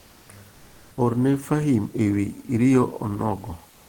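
A speech clip where the pauses at 0 to 0.25 s, 0.55 to 0.91 s and 3.73 s to the end lose the real room noise and get comfort noise in place of the background: flat, featureless hiss at about the same level, likely discontinuous transmission kicking in during silence.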